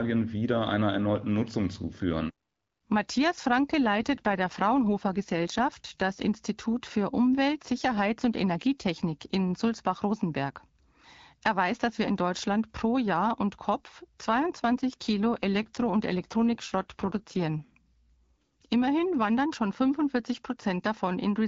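From 3.85 to 6.12 s and again from 14.28 to 17.65 s, an AMR rate drop makes the speech rougher and more synthetic, consistent with AMR-WB stepping down from 12.65 to 8.85 kbit/s. Unlike a bandwidth switch or packet loss, the band stays full and nothing drops out.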